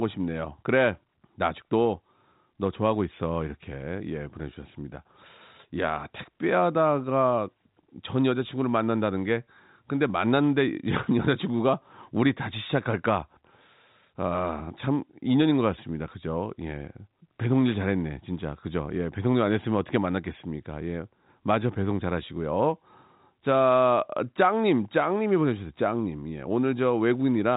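No technical faults occur in this speech recording, which carries the usual telephone band limit of G.711 A-law coding with nothing above 3.8 kHz.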